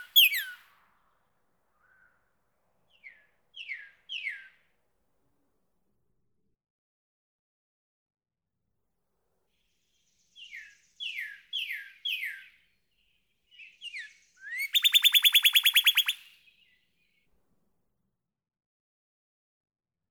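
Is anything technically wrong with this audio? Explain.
Yes. There is an underrun with held sample at 1.29 s and again at 17.73 s. Each time the output buffer ran dry, and the converter froze on its last value until data arrived. The waveform sits flat for about 4.3 ms and then 2.7 ms, with the second gap fitting a 128-sample buffer. Since no audio was lost and playback picks up where it paused, each event is a brief, soft stall in the sound rather than a sharp click.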